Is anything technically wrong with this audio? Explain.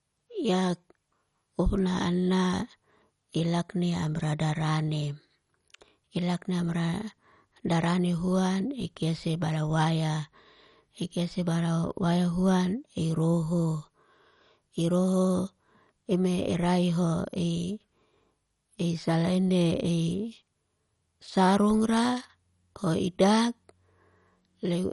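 Yes. Throughout the speech there is MP2 compression damage, likely at a low rate near 48 kbps. Short of bits, the coder shuts off upper sub-bands and coarsely quantises the rest, so the sound is dull, gurgling and granular. A spectrogram shows nothing above 11.3 kHz and blocky, flickering bands below.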